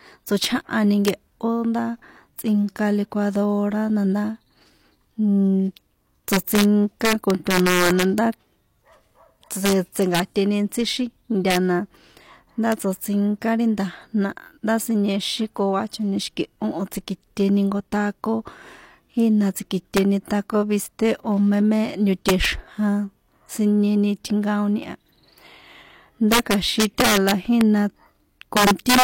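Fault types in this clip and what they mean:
Integer overflow: throughout the clip, the speech was driven about 7 dB past the largest value the integer format could hold. Instead of being limited, those samples wrapped around to the opposite sign, jumping across the full range. Only a small fraction of samples, well under one percent, went over, so the fault appears on the loudest speech peaks as cracks that are sharper and more abrupt than ordinary clipping.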